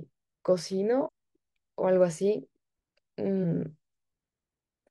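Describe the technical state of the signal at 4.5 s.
Around 4.5 s the signal is intact, with no audible fault at that moment.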